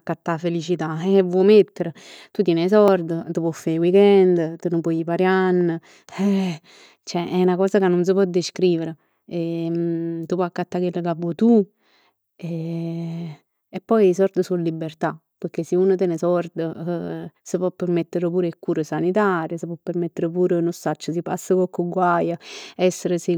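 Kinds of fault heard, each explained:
Block of digital silence: at 2.88 s, between "tien 'e" and "t' può fa 'e", the speech drops to silence for only about 0.6 ms and returns with no fade. The two hard edges merge into a tick or dip rather than an audible gap. On the waveform it is a tiny flat run, cut off abruptly on both sides. On a spectrogram it shows as a thin vertical broadband line through the speech.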